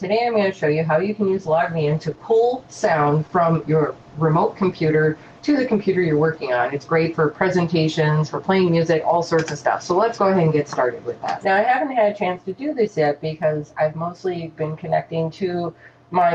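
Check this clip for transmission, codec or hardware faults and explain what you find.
One transmission fault is present: a call bitrate drop from 1.28 s to 8.49 s. The encoder's bit budget was cut sharply, which fits a fall from 48 to 15 kbps, so it codes more coarsely and narrows the band from 20 kHz to 12 kHz. The sound turns rough and muffled, bottoming out for about 4.9 s before recovering. Unlike packet loss, there are no gaps or clicks, only a sustained loss of detail.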